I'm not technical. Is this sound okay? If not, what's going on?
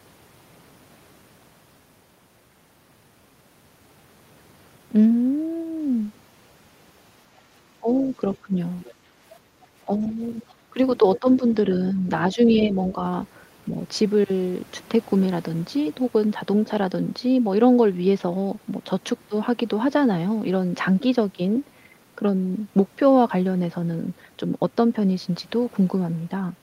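No, there are a few problems, all in the stretch from about 7 to 13 seconds, and they point to one thing: an echo canceller struggling during a call played on a loudspeaker.

First, there's the other side's voice leaking through. At 7.37 to 7.41 s you get a very faint scrap of a second voice, then a clearer bit from 8.34 to 8.92 s, and the most noticeable one from 11.16 to 11.56 s. The likely cause is that the far end was coming out of a speaker near the mic, and the canceller didn't scrub all of it out.

Second, speech suppressed in double talk. From 7.8 to 8.54 s and 9.85 to 11.28 s the main voice dips noticeably in short patches, and from 11.93 to 13.01 s it dips again, only slightly. The first two overlap the leak moments, so this is likely both people talking at once, with the canceller unable to tell them apart and turning everything down.

Third, background gated by the echo canceller. 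From 8.95 to 9.57 s the room sound sinks for about half a second and then comes back. That's the canceller clamping the mic while the speaker was playing, then letting go.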